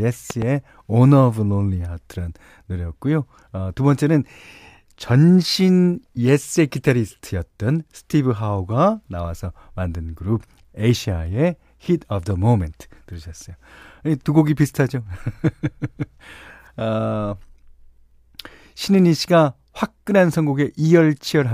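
At 0.30 to 0.45 s, a loud pop sounds as two sharp thumps roughly 10 dB above the speech, likely from a voltage spike such as a plug or switch.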